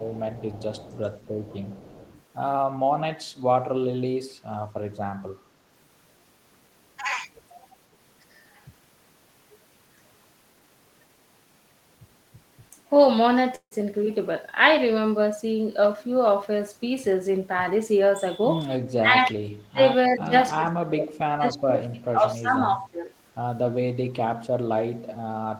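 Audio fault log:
0.00–2.22 s, echo leak: a faint delayed copy of the speech trails about 0.29 s behind, sitting about 25 dB under the main voice. Likely a loudspeaker at the far end, with its echo canceller letting some of that pickup slip back into the call.
1.40–1.48 s, 19.00–19.81 s, 20.15–20.34 s, 20.53–23.11 s, speech suppressed in double talk: the voice ducks and thins in chunks, dropping by roughly 15 dB in the short first dip and by about 20 to 35 dB in the later, longer stretches. Likely the echo canceller misreading both sides talking at once as echo and clamping down on everything.
13.55–13.73 s, long network dropout: about 160 ms of audio simply never shows up. The receiver papers over the hole with a fading continuation of the last sound for about 156 ms, plus around 70 ms of near-silence, then speech resumes with that bit missing. Likely packets lost on the network.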